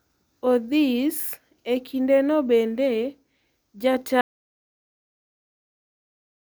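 Speech recording with an audio dropout to silence from 4.21 s to the end: the signal cuts mid-flow into silence, likely from a lost input or link.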